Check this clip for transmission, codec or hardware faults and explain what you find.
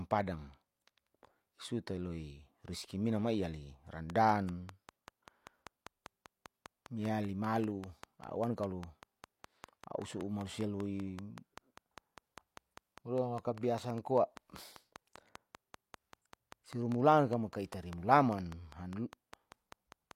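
One hardware-type fault is present: a train of clicks from 4.10 s, just after "riski mina mai ali", to 20.12 s. Regular pulses arrive about 5 times per second, some seventy in all, peaking roughly 10 dB above the speech. They are likely interference from nearby equipment or a faulty connection or power supply. They sound like steady ticking over the speech and the pauses. A spectrogram shows evenly spaced thin vertical lines, and the waveform shows sharp spikes at a regular interval.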